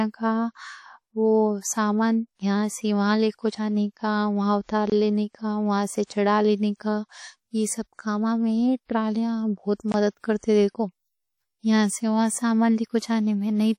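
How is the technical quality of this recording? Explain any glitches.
The recording is speech with clearly audible coding damage throughout, plus three short glitches: two pre-echoes and one gap between chunks.

WMA compression runs through the whole clip. The sound has a ringing, washy quality, with hiss that swells and fades with the signal. The cause is likely a Windows Media Audio encode at a low bitrate, around 48 kbps. A transform codec like this spreads quantisation noise across long blocks and drops weak spectral detail. On a spectrogram, content stops at about 19.7 kHz, and the upper bands look patchy and smeared in time.

Pre-echo occurs at 6.04–6.10 s, spreading about 58 ms, just after "اٹھا لینے کا وہاں", and again at 10.40–10.43 s, about 25 ms, just after "میں ٹرالیاں بہت مدد". Each time a sharp attack sits late in a coding block, so noise sized for the loud onset also fills the quiet moment before it. 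You hear a brief hiss leading into a softened attack. On a spectrogram, a faint broadband smear appears ahead of each onset, and the waveform shows low-level noise before the transient.

A gap between chunks appears at 9.92–9.94 s, a hole of about 21 ms just after "کاماں میں ٹرالیاں بہت". This fits audio handled in 5-second chunks, with silence left at the join, perhaps from padding or late playback of the next chunk. It is heard as a brief dropout that interrupts the flow. The waveform shows a sudden flat stretch, and the spectrogram shows a narrow vertical blank band.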